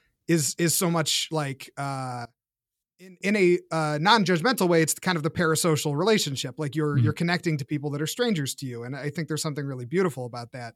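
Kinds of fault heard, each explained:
One channel inverted: From about 2.25 to 3.21 s the speech drops by about 23 dB to a faint copy, which points to one side likely having flipped polarity, so the centred voice largely cancels against the other channel when summed to mono.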